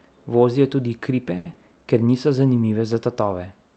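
A packet arrived late in this speech recording, sent over an Opus call path whose top end stops near 8 kHz. The jitter buffer ran dry from 1.37 to 1.47 s, a short stall from a late packet. The receiver held the last sound for about 80 ms until the packet came, then resumed with nothing lost, so that moment drags with a faint buzz. Shortly after, from 1.53 to 1.57 s, 40 ms of audio never reached the decoder. This short concealed packet loss was bridged with about 20 ms of extrapolated sound while the buffer shed roughly 20 ms of delay, leaving a brief smear where a fragment drops out.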